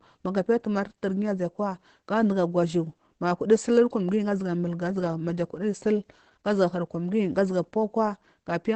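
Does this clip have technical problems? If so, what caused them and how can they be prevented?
Yes. Throughout, the speech sounds muffled and hoarse, with nothing above 8.6 kHz, the likely cause being Opus compression at a low rate, which fits about 12 kbps in its SILK speech mode. Unlike MP3, it leaves fewer swirling, watery holes. Encoding at a higher bitrate prevents it.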